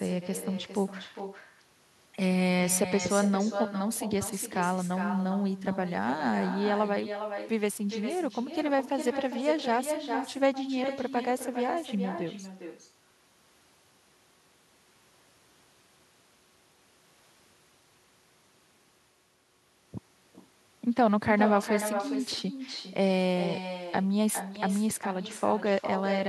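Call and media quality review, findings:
Echo with no canceller, throughout. Each phrase trailed by a quieter, thinner copy, about 9 dB down, roughly 0.4 s late. Far-end loudspeaker re-captured by its microphone, returned over network round trip, no echo cancellation removing it.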